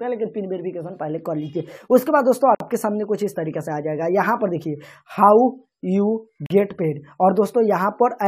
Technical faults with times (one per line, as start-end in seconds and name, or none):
2.55-2.60 gap at a join of encoded pieces
6.46-6.50 gap at a join of encoded pieces